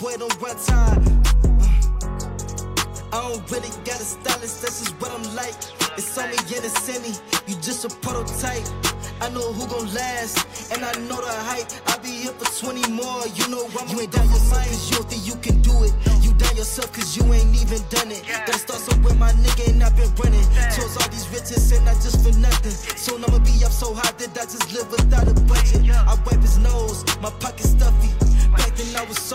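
Nothing here jumps out as a technical fault, and there's nothing that needs flagging along the way.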